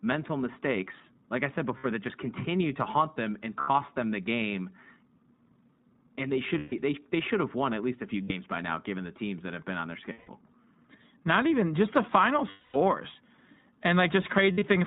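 A speech recording runs through the iLBC codec from start to finish. Nothing above 4 kHz survives. The voice sounds clear but rough and slightly synthetic, which fits the 15.2 kbps mode with 20 ms frames. Each frame is coded on its own. Lost iLBC frames cause seven gaps, at 1.78, 3.60, 6.58, 8.22, 10.12, 12.50 and 14.52 s. They last 60 to 240 ms. The gap at 3.60 s falls between "to haunt them and" and "them the game". The one at 10.12 s follows "have been on their". The longest, at 12.50 s, follows "even just the final". In each gap the decoder repeats the last pitch cycle mixed with noise. This gives a held, buzzy vowel that fades over the longer losses. The last gap is broken into short bursts across 140 ms, none much over 70 ms. Because frames stand alone, the speech comes back almost at once after each gap.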